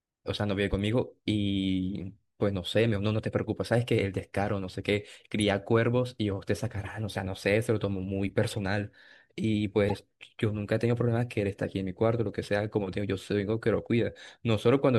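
At 6.85 to 6.88 s and again at 9.89 to 9.94 s the speech is hit by a corrupt frame decoded. Flipped bits in the compressed stream were decoded as if valid, so misread gains and codes placed energy at wrong frequencies for the span of the damaged data, about one frame the first time and about two the second. Each is heard as a brief chirpy burst: the first around -30 dBFS, the second louder, near -20 dBFS.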